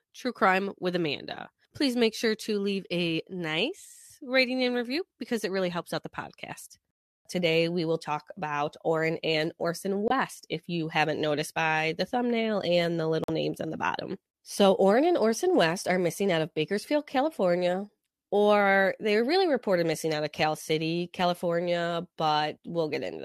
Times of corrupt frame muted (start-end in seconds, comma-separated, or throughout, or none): 10.08-10.12, 13.24-13.30